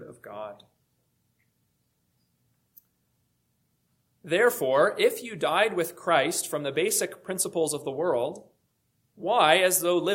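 Nothing goes wrong anywhere in this one; there's no glitch, dropout or other fault to point to at any moment in the audio.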